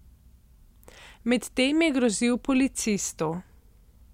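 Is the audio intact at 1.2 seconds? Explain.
Yes, the speech at 1.2 seconds is intact, with no dropout, click, distortion or other fault to be heard at that moment.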